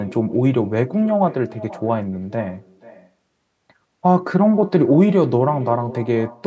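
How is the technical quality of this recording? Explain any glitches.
The recording is marred by an echo with no canceller, present from start to finish. Every phrase returns roughly half a second later as a fainter, thinner copy, about 19 dB below the speech. The far end is playing the call through a loudspeaker, its microphone is capturing that playback, and nothing strips it out, so the speech comes back after the network round trip. The call's microphone processing leaves nothing above 8 kHz.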